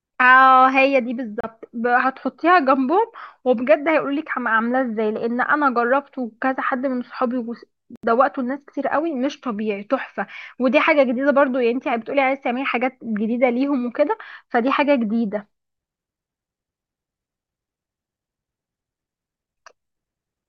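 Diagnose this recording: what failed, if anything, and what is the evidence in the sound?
Bluetooth dropout, 1.41–1.46 s and 7.96–8.06 s: speech falls silent, then resumes 30 and 76 ms further on, likely late packets dropped on the wireless playback link.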